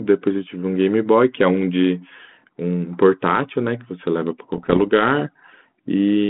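From 4.55 to 4.81 s the speech breaks into pops and rough, gritty bursts with brief level jumps. These are bit errors on an ADPCM link, at well under one percent. Each flipped bit derails the decoder's step size and predictor, so the damage rings on for milliseconds.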